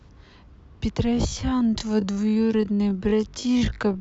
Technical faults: time-stretched section

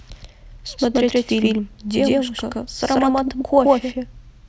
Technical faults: channel delay (doubling)

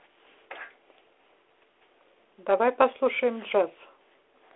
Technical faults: none

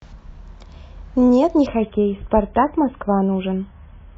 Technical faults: adaptive stream at a lower bitrate

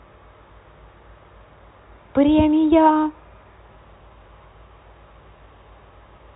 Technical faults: none

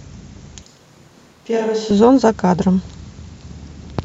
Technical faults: switch to a distant microphone

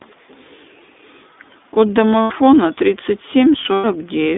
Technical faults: iLBC codec; lost iLBC frames

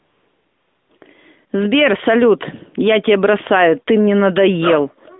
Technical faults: AMR comfort noise

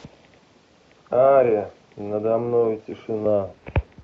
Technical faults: none

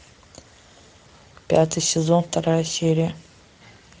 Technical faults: Speex codec

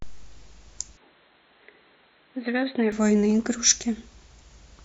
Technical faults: input switched to a poorer device

